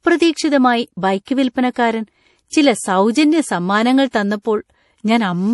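Throughout the speech, the encoder has likely run short of bits under MP3 compression, which fits a rate around 48 kbps. It cuts everything above 11.5 kHz and lets weak frequency lines flicker between frames. The result sounds dull and watery, with swirling, metallic sibilants.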